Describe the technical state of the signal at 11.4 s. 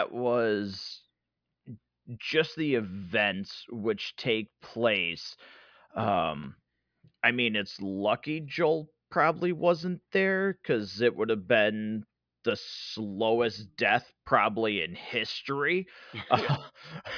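At 11.4 s the speech is intact, with no dropout, distortion or other fault at that point.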